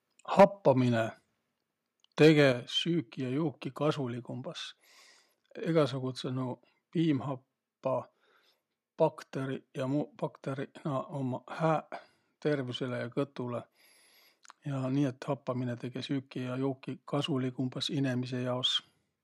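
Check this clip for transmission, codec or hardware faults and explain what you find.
Two kinds of fault are audible, and both come in pairs early in the clip.

Microphone overload occurs from 0.39 to 0.45 s and again from 2.22 to 2.45 s. The speech peaks are likely driving the converter about 7 dB and about 4 dB past its limit. The flattened tops give the loudest syllables a harsh, crackling edge. The first burst is severe, with about a fifth of its samples cut off. The second is milder, with only a small share clipped.

Microphone volume stepped down comes with each overload, at 0.40 s and at 2.52 s. The call software likely reacted to the clipping by cutting the input gain in one step. The cuts are about 4 dB and then about 6 dB. Speech and background fall in level abruptly, during the first burst and just after the second.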